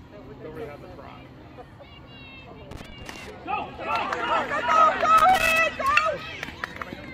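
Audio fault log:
2.71–3.30 s and 5.18–5.59 s, loose connector crackle: a worn or dirty contact in the signal path is shifting and repeatedly losing and regaining connection, so the audio is chopped on and off many times in quick succession. Each make and break leaves a small discontinuity, and together they form an irregular burst of scratchy crackle lasting about 0.6 s the first time and 0.4 s the second.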